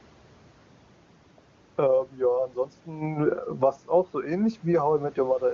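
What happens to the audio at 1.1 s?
Nothing goes wrong at 1.1 s; the speech there is intact, with only the faint room noise underneath and the HD Voice codec adding no audible damage.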